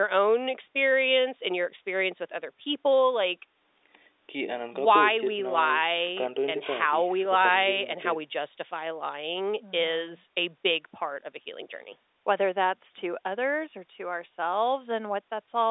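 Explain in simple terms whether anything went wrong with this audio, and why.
Nothing went wrong: the call's microphone processing and the G.711 telephone coding both did their normal job, which leaves the speech in the usual landline range with nothing above about 3.8 kHz, exactly what an ordinary phone line delivers.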